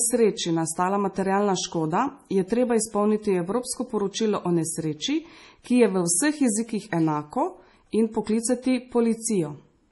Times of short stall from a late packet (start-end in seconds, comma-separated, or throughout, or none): none